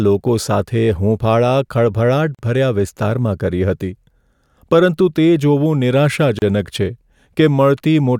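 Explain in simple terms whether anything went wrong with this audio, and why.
A gap at a join of encoded pieces appears at 2.35 s, just before "વિસ્તારમાં કરી", and again at 6.39 s. These are short silences of about 42 ms and 32 ms, four seconds apart. The speech was encoded in separate pieces and joined without trimming each piece's built-in silent start and padded end.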